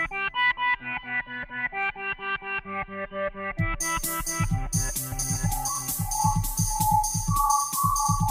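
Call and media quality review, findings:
Doubled audio track, 5.12 s to end: likely a second, slower capture path or an edit holding two out-of-step copies. A full-band duplicate trails by about half a second, roughly 5 dB quieter, dry and without decay, starting abruptly.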